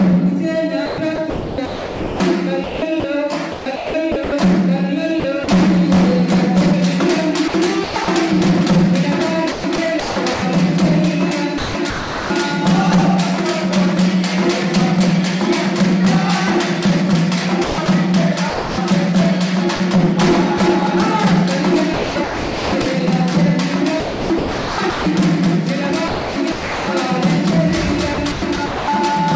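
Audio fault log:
0.86–5.48 s, 7.48–8.08 s, 9.52–12.30 s, 17.64–20.60 s, 21.94–28.88 s: sound chopped by the voice detector. Quiet stretches drop to flat, smooth comfort noise, likely from the sender's voice detector gating. This shows as steady, low-level noise patches in the waveform and spectrogram.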